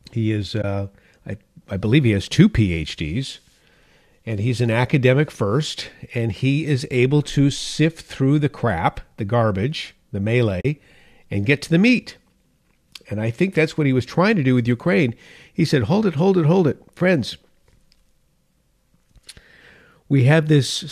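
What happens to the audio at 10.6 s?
Right after "crap the garbage the", AAC frame loss with muting leaves a soft-edged gap of about 40 ms from 10.61 to 10.65 s. That length fits four lost frames whose spectrum the decoder zeroed, so the overlapping windows fade the speech out and back in.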